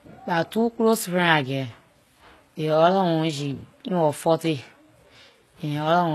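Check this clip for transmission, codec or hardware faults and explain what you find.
The speech has a codec fault running through the whole clip: HE-AAC compression. Nothing reaches above 12.3 kHz, and the treble sounds synthetic: s sounds come out gritty and lispy, with a metallic sheen. The likely cause is spectral band replication. The codec keeps only the lower spectrum and fills the top by copying lower bands upward under a coarse envelope, so the upper harmonics no longer line up with the real ones. The damage is plainly audible, which fits a very low bitrate of around 16 kbps. On a spectrogram, the upper region looks like a smeared, blocky copy of the bands below, ending in a hard edge at 12.3 kHz.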